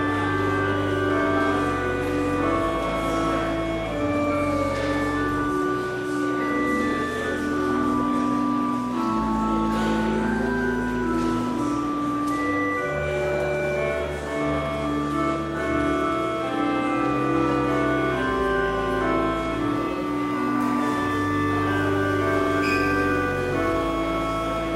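From about 19.75 s to the end, there's crude rate conversion. Samples get dropped without any filtering, which fits a 48 kHz to 44.1 kHz change. That leaves a gritty, inharmonic fizz riding on loud and bright moments, sitting roughly 30 dB under the sound.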